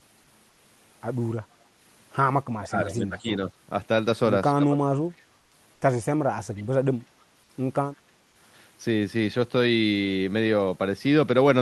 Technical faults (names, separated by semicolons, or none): comfort noise in place of the background; speech suppressed in double talk; echo leak